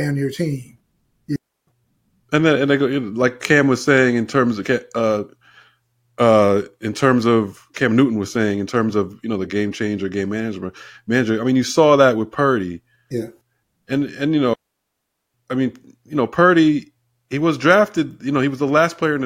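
Clean holes of near silence cut into the speech at 1.36–1.67 s (about 0.32 s) and at 14.54–15.34 s (about 0.80 s), with no noise bursts around them. These are digital wireless dropouts: the link lost too much data and the receiver muted briefly.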